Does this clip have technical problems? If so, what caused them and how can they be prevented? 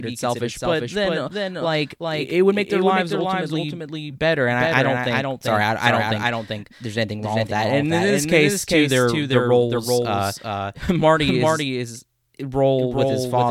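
Yes. Throughout the speech, every syllable comes back a second time, roughly 400 ms later and only a few decibels quieter, about 5 dB down. The copy is full-band and dry, with no decay or room tone, so it sounds like a second identical track running out of step rather than an echo. This doubled audio track is likely caused by the signal being captured twice, once through a slower path, or an edit leaving two offset copies. To prevent it, make sure only one capture path or track reaches the mix.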